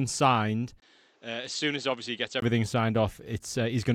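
Input switched to a poorer device from 0.8 to 2.42 s in this speech recording: after a brief 20 ms gap, the sound turns dull and boxy, with nothing above 8.1 kHz, a drop in level of around 10 dB, and new background noise sitting roughly 35 dB below the signal. At 2.42 s the full bandwidth returns. The likely cause is the system changing its input mid-recording to a lower-quality microphone with its own tone and noise.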